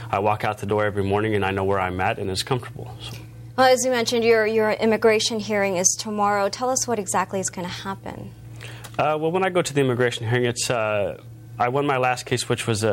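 No technical faults can be heard anywhere in the audio, and the signal keeps an intact level and continuity throughout.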